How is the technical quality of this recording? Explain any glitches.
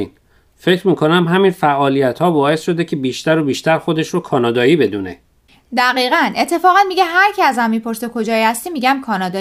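No technical faults turn up anywhere in the recording, and the signal stays continuous and steady throughout.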